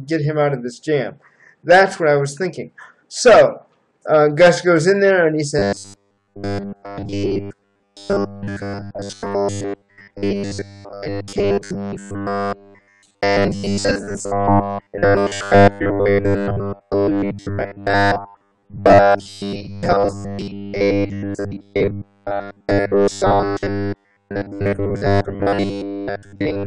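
From 5.59 s to the end, robotic sound from repeated short buffers sets in. A rigid 100 Hz buzz replaces most of the audio, likely from 10 ms buffers repeating.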